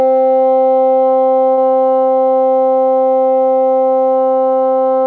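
A recording of everyday sounds passed through a call path whose content stops at 8 kHz, consistent with a wideband codec such as G.722. Between 1.54 and 1.71 s there is a short stall from a late packet. The jitter buffer ran dry, so the receiver stretched the last sound by about 34 ms and then resumed where it had stopped, losing nothing. On a spectrogram this looks like a brief smeared, flat stretch of repeated texture. On the waveform, the events that follow arrive slightly late.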